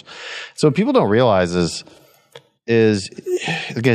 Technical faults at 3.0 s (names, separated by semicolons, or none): none